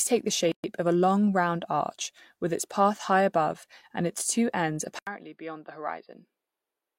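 At 0.52 s a gap at a join of encoded pieces cuts the speech for about 121 ms. Untrimmed encoder padding leaves a silence with softened edges before the speech resumes.

At 4.99 s the input switched to a poorer device, likely a different microphone or headset. After an 80 ms silence, the speech turns dull, nothing above 4.9 kHz, roughly 10 dB quieter, with a faint new noise floor.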